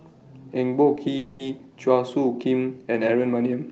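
At 0.95 s the speech snags for a moment: the sound is held about 20 ms too long with a faint buzzy smear, then carries on with nothing lost. This is a short stall from a late packet. The packet arrived after its playout time, the jitter buffer emptied, and the receiver stretched the last sound until the packet turned up, adding roughly 20 ms of delay.

From 1.17 to 1.41 s the speech hangs for about 240 ms. The last sound is drawn out into a fading buzz rather than silence, and then the speech resumes exactly where it stopped. This is a call audio freeze, likely from packets held up in transit. The jitter buffer ran dry and the receiver concealed the gap for about 220 ms. That pushes everything after it later without skipping any speech, and the concealment stays within the Opus call path's band, which stops at about 8 kHz.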